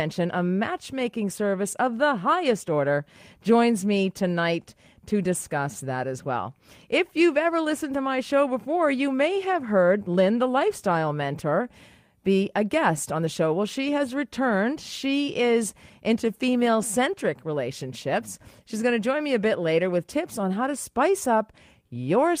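No technical faults can be heard anywhere in the recording.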